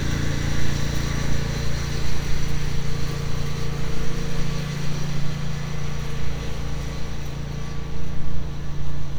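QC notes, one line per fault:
No faults found.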